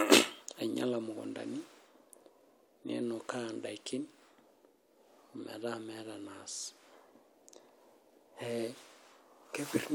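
A recording of speech, with no technical fault to report. Nothing at any point in it calls for a time or a cause.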